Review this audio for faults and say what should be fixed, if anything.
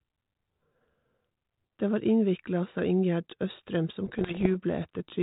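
Bit errors on the ADPCM link, at around one percent, derail the decoder's step size and predictor from 4.06 to 4.47 s, producing pops, rough bursts and brief level jumps. Stronger error protection on the link, or concealment that mutes and resets the decoder when corrupted frames arrive, would prevent this.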